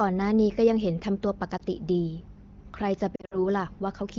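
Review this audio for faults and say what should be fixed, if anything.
Lost AMR speech frames occur at 1.58–1.62 s, a brief dip where about 20 ms of sound is missing, and at 3.16–3.44 s, where roughly 120 ms of gaps are scattered across 160 ms with the longest run lasting 60 ms. In each gap the decoder repeats the last good pitch and vocal tract settings at falling gain, so the sound smears and sags. On a waveform these show as short amplitude dips. On a spectrogram they appear as frozen, fading harmonic bands, with weak, rough onsets as the sound recovers. The AMR wideband (HD Voice) codec, running at a rate that fits 15.85 kbit/s, adds only light coding texture. To prevent the frame losses, strengthen the radio link, for example with better coverage, a more robust codec mode or added redundancy, so fewer frames fail their checksum.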